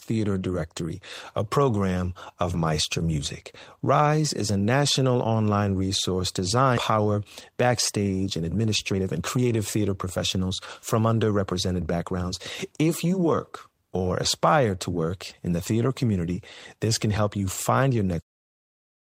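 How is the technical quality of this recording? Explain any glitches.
The recording has two kinds of timing fault, both in the middle of the speech, ending with a smooth fade-out from about 18 s to 18.23 s.

At 6.77 s, just after "a national online resource", there is a skip ahead. Roughly a second of speech was discarded in transit or by an overflowing jitter buffer, and playback jumps straight to later audio with no silence or filler. That seamless splice, rather than a gap or muted hole, separates it from a packet-loss dropout. Words simply go missing mid-phrase.

From 7.50 s to 10.51 s and again from 10.99 s to 12.31 s, a jitter buffer speed-up is audible. The buffer had built up excess delay, so the receiver repeatedly trimmed pitch-period-sized slices, removing about 0.4 s and then about 0.15 s. The speech runs at roughly 113% and 111% of normal rate and sounds hurried, while pitch stays the same. 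That unchanged pitch, and the way it comes in bursts rather than across the whole clip, tells it apart from a resampling or playback-rate error.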